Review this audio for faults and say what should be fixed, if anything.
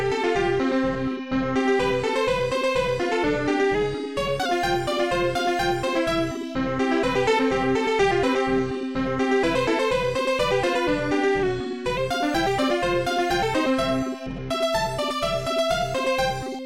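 From 3.75 to 4.46 s the sound runs about 6% fast and rises roughly a semitone (101 cents), then snaps back. From 11.43 to 11.97 s it runs about 6% slow and drops by about 107 cents. These are likely drift correction steps, where clock-matching software abruptly changed the playback rate to refill or drain its buffer. On a spectrogram, every harmonic jumps up or down together for those spans, with hard edges at both ends. Correct clock drift with gradual, inaudible resampling adjustments rather than stepped rate changes.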